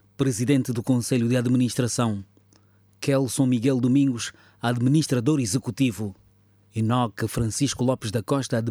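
No dropouts, glitches, distortion or level problems turn up anywhere in the clip.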